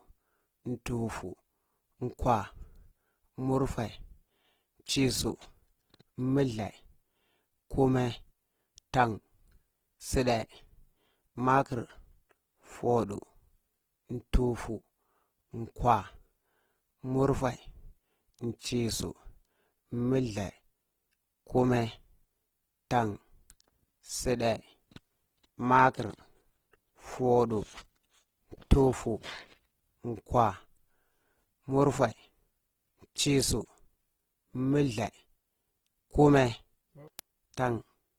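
Opus compression throughout this speech recording: plainly audible rough, grainy texture from bands noise-filled at a starved bitrate, likely near 16 kbps, while full bandwidth reaches about 20.2 kHz.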